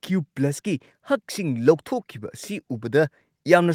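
No audible fault turns up anywhere in this speech recording.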